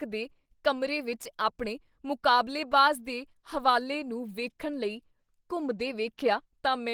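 Throughout the speech, the sound is muffled and hoarse, with a grainy roughness. The cause is likely Opus compression in its hybrid speech mode, fitting a rate near 16 kbps. Bits run short, so detail is filled in coarsely. Content still reaches about 20.2 kHz.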